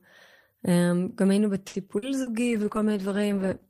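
A speech clip in which, from 1.67 to 1.77 s, the sound hangs on one held moment with a faint buzzy edge before carrying on exactly where it left off, so nothing is skipped but the timing drags. This is a short stall from a late packet: the jitter buffer ran dry, and the receiver stretched the last sound by about 70 ms until the delayed audio arrived, leaving the rest of the stream 70 ms later than before. Shortly after, at 1.98 to 2.05 s and again at 2.22 to 2.29 s, there are two brief smeared wobbles where the real sound seems to blur over. Each is a short concealed packet loss. About 40 ms of audio never reached the decoder in time, and the receiver papered over the gap by extrapolating from the preceding sound before crossfading back into the genuine signal. What was in those gaps is gone rather than delayed. From 2.42 s to the end the voice turns rough and watery, losing its crispness. 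That is a call bitrate drop: the bandwidth estimate fell and the encoder went from 48 to 13 kbps, coding far more coarsely at that starved rate and trimming high-frequency detail, and it stays there for the remaining 1.28 s without recovering.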